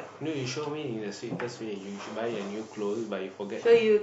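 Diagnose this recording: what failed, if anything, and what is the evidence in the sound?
Nothing failed that I can hear: the speech runs along without anything from any stage in the chain drawing attention to itself, so there's nothing here to diagnose.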